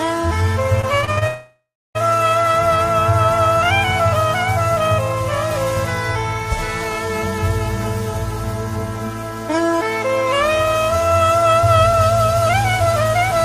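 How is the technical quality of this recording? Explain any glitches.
The quality takes a real hit early on, with two network glitches back to back in the first two seconds.

From 0.81 to 1.23 s there's repeated packet loss, giving a robotic sound. It's a quick run of short holes, the longest about 56 ms, each patched by stretching the previous sound. About a third of that span is filled this way, so it comes out choppy.

Right after, from 1.27 to 1.97 s, it sounds like a long network dropout, likely from the connection stalling. The last sound is held and smeared for a while, then it drops to silence for about 0.31 s. When the audio resumes, the missing stretch is simply gone.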